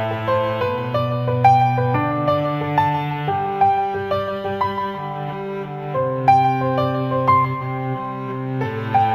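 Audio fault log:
throughout, imaging from linear upsampling: the audio was raised from 16 kHz to 44.1 kHz by joining samples with straight lines, a weak interpolation filter that dulls the top of the band and leaves faint mirror images between 8 kHz and 16 kHz, roughly 45 dB down, heard as light metallic shimmer on bright, sibilant moments.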